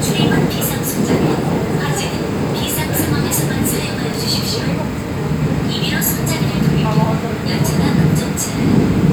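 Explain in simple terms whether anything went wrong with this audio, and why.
Nothing went wrong with this audio, as there are no dropouts, glitches or other faults anywhere in it.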